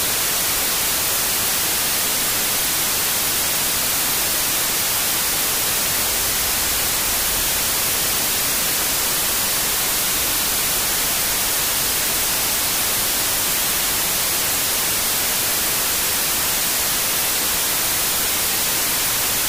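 These sounds suffer a wrong sample width throughout: 32-bit data read as 16-bit splits each sample in two, so playback runs at half speed, an octave low, beneath loud hiss from the garbage low halves, which a plain sample-rate mismatch wouldn't add.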